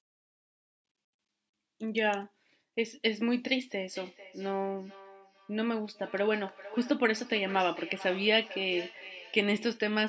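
From 3.93 s to 9.89 s the speech carries a feedback echo between two devices: one device replays the other's microphone, which hears it again. Repeats arrive roughly every 0.4 s, up to about 16 dB below the speech. Unlike room reverberation, they come back as distinct, thinning copies.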